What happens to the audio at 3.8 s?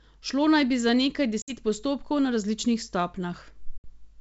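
At about 3.78 s the speech drops out in a hard-edged hole of roughly 60 ms, ending near 3.84 s. That's packet loss on an ADPCM call, and the gap fits a few packets going missing and being filled with silence. Because the G.722 decoder's adaptive predictor and step size lose sync with the sender's, the speech comes back with some distortion, then settles within a few tens of milliseconds.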